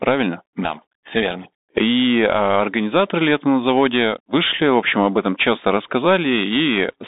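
From start to finish the speech runs through a Bluetooth CVSD headset codec. The band sits at roughly 200 Hz to 3.7 kHz with nothing above 3.8 kHz, and plainly audible damage rides on top: a granular hiss under the voice, scratchy s sounds, and a roughness on loud bright moments where the one-bit delta steps can't keep up, which fits a 64 kbps stream. That slope-overload grit and hiss separate it from a clean telephone band-limit.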